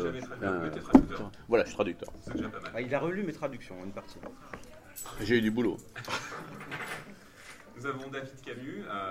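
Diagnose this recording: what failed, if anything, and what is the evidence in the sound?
A repeated buffer at the driver or buffer stage, heard at 6.27 s as a brief click. New audio arrived late, so the device replayed its last 1.45 ms block once, fitting a 64-sample buffer, with hard joins and a millisecond or two of audio lost.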